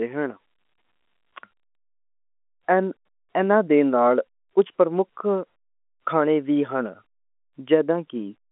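Nothing stood out on listening; the speech sits within the narrow band of an ordinary telephone line, with no audible content above about 3.8 kHz.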